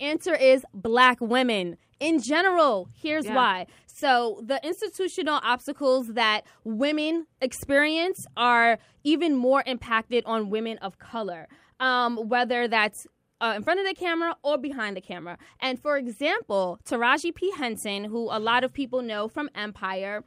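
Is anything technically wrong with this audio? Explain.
No, nothing in this speech recording stood out as technically wrong on listening.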